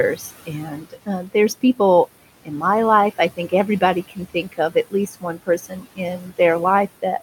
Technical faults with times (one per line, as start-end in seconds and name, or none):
0.00-7.22 noise suppressor artifacts
0.16-1.08 speech cut by the noise suppressor
2.43-2.63 speech cut by the noise suppressor
3.37-3.82 speech cut by the noise suppressor
4.08-6.39 speech cut by the noise suppressor